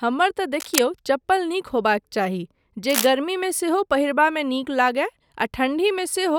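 Cable scratch noise at 0.54–0.79 s and 2.88–3.07 s: uneven rustling bursts nearly as loud as the speech, not single clicks, likely from a worn connector shifting.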